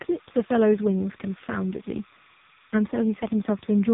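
From the first moment to the end, the speech carries timecode bleed: a linear timecode signal has leaked in from an adjacent track or cable path. Its square wave toggles between two pitches, roughly 1 kHz and 2 kHz, giving a steady, chirping warble that sits faintly behind the speech, somewhere around 30 dB below it. The modulation pattern repeats at a rate consistent with 30 frames per second code.

Across the entire clip the speech has also passed through the AMR narrowband mobile codec, the AMR-NB speech coder used on 2G and 3G networks. Nothing above 3.8 kHz survives, so the top end is cut off sharply. The damage is heavy: the voice sounds buzzy and synthetic, as the codec rebuilds it from a coarse vocal-tract model and a handful of excitation pulses per subframe, which fits its low-rate mode of about 5.15 kbps.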